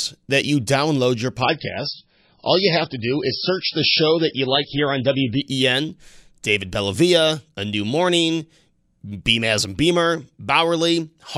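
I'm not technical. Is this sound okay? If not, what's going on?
No. Just after "that you download your", from 1.42 to 5.42 s, the speech suddenly turns dull and watery, with the crisp top end gone, then snaps back. That is an adaptive stream at a lower bitrate: the connection slowed, so the player briefly switched to a lower-quality version.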